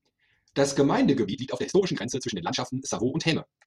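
Speech, with a time-stretched section from 1.24 s to the end: pace abruptly doubles while pitch holds, sounding rushed, likely from software dropping short segments to shorten it.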